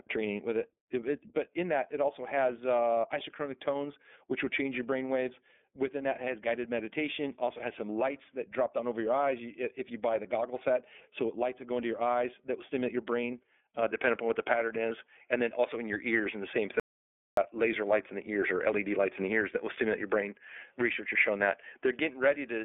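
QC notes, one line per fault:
Throughout, iLBC codec: plainly audible narrowband coding, nothing above 3.7 kHz, each 30 ms frame coded independently, giving a rough, synthetic edge to the speech.
13.82 s to end, input switched to a poorer device: after "will stimulate your brain" the tone changes with no gap, band tops out near 3.8 kHz, level shifts about 5 dB, new background noise well below the speech; likely a change of input device.
16.80 to 17.37 s, audio dropout to silence: 0.57 s of dead silence with no room tone, content lost; likely the input was briefly disconnected or muted while recording continued.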